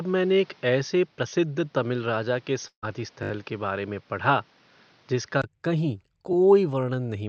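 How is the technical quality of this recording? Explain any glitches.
The recording has several audible faults: a dull first stretch, one dropout, and two stutters. The call path itself tops out around 8 kHz, consistent with Opus wideband coding.

From 0.0 to 5.44 s, the audio sounds narrower and duller, with nothing above 6.4 kHz and a background noise floor roughly 35 dB down. This is likely an input switched to a poorer device. At 5.44 s, a 20 ms gap marks the switch back, with no noticeable level jump.

From 2.67 to 2.84 s, there is a burst of packet loss. The receiver extended the last sound for about 150 ms as a fading tail, including about 90 ms near-silent, and 160 ms of audio is missing.

From 3.23 to 3.31 s, a repeated buffer occurs. A 20 ms block replays four extra times because fresh audio arrived late, producing a brief buzzing stutter.

At 6.33 s, a 20 ms block plays once more, heard as a single click-like stutter.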